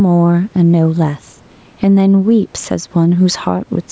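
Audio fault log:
Throughout: gain pumping. The gain swings by roughly 5 dB, and loud and soft passages sit close in level. This likely comes from input gain set too high, with a fast limiter repeatedly pulling it down.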